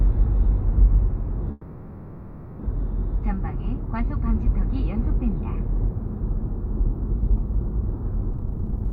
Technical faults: call audio freeze; jitter buffer speed-up

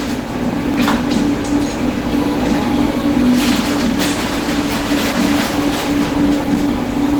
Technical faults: mains hum; Opus compression; clock drift buffer slips

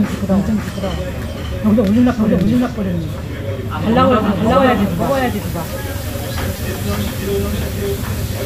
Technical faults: doubled audio track; repeated buffer

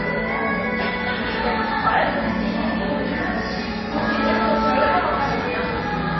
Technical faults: MP3 compression

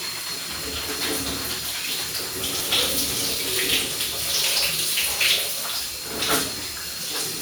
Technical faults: lost LE Audio frames

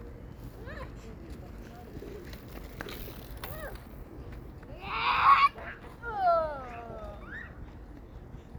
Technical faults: none

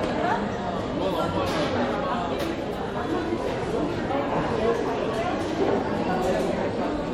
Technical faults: MP3 compression

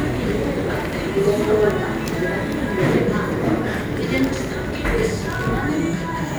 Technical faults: clock drift buffer slips

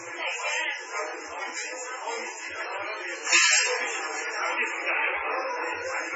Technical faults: MP3 compression

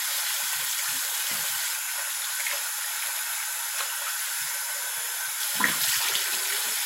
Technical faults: low bit depth with dither

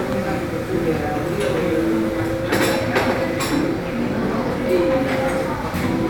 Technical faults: none

